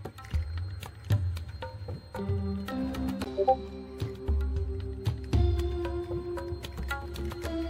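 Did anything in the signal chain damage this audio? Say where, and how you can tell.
No, nothing audible points to damage at any stage of the chain, from capture through to playback.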